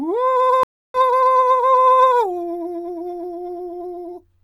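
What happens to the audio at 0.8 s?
A stream reconnect runs from 0.63 to 0.97 s. The connection drops, the music goes silent for 0.31 s, and a restarted decoder resumes roughly 0.2 s further on.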